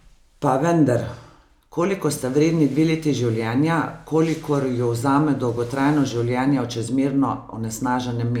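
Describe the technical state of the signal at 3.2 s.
At 3.2 s the speech signal is intact, with no audible fault at that moment.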